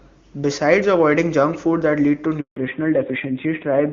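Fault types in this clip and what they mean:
Handover gap: While the call was passed from one network to another, no speech frames reached the listener, so the sound fades out within a few tens of milliseconds and stays silent for 160 ms, from 2.40 to 2.56 s. Unlike an ordinary lost packet, there is no filled-in or smeared sound covering the hole, just plain silence. When the audio returns, it sounds different, because the new link carries it with another codec.
Fallback to narrowband: From 2.56 s to the end, the call no longer uses the HD Voice wideband codec and drops to an older narrowband one, removing everything above 4 kHz. Before the switch, the wideband sound is clear and full, which fits a high AMR-WB rate. After it, the sound turns dull and rougher, which fits a low narrowband rate around 7.4 kbit/s. A low-rate wideband mode would also sound raspy, but it would keep content up to about 7 kHz. 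Here the top of the band is gone.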